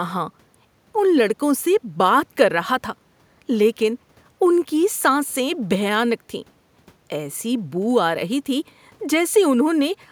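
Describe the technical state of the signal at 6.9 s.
At 6.9 s the signal is intact, with no fault present, only the faint room noise of the recording space sitting about 40 dB below the speech.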